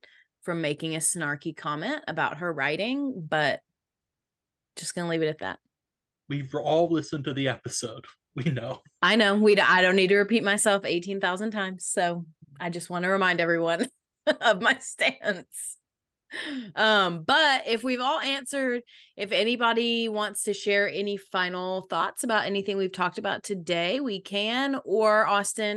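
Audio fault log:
No faults are heard in this speech recording. There is nothing to log.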